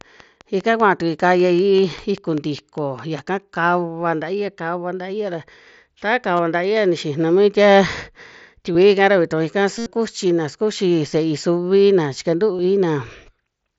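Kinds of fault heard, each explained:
Train of clicks: Something is injecting a repeated impulse into the signal path, likely interference from nearby equipment or a faulty connection or power supply. Here it makes a steady ticking of about five clicks per second, regularly spaced and much alike, roughly fifteen in all. They peak about 5 dB above the speech and run from the very start to about 3.2 s, just before "kava ntaia kava", audible in pauses as well.
Concealed Bluetooth headset packet loss: Audio packets between headset and phone went missing, and the receiver filled each gap by repeating the closest-matching recent stretch of waveform. Short gaps of about 22 ms at 6.37 s and 8.73 s, and 15 ms at 12.58 s, are nearly hidden. The 75 ms gap at 9.78 to 9.86 s holds a buzzy, full-level tone with a small warble where real speech resumes.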